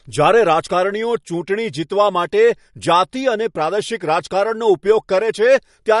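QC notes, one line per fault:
Throughout, MP3 compression, likely: the speech stops above 11.2 kHz and carries a plainly audible watery swirl, chirpy s sounds and smeared onsets as weak frequency lines flicker on and off. A low-pass filter would dull the top without swirling. Fits about 48 kbps.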